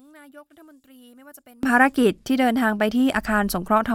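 From the start to about 1.63 s, the speech almost vanishes in mono, dropping by about 30 dB and leaving only a faint remnant. That's likely one channel inverted: with one side's polarity flipped, the centred voice cancels when the channels are summed.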